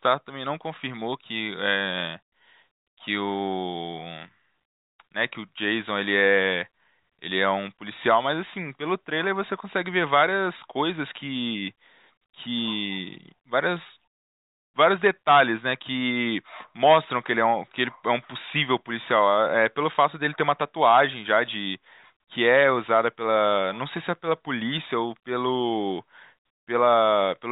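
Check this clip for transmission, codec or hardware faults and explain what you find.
No transmission, codec or hardware faults turn up anywhere in the speech. It has passed through a working call path, and the lack of any content above 4 kHz fits a narrowband telephone codec such as G.711 mu-law at 64 kbps.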